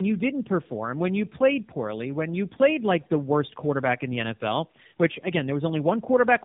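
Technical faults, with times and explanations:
Throughout: tandem speech coding. The speech sounds like it passed through two low-rate speech coders in a row, likely a narrowband AMR stage near 6.7 kbit/s followed by a second near 12.2 kbit/s, with a plain telephone-grade link between them. Each coder re-models the previous one's errors, so the sound turns rough, muffled and warbly. On a spectrogram everything stops at about 3.7 kHz, and the harmonics look smeared and blotchy rather than clean.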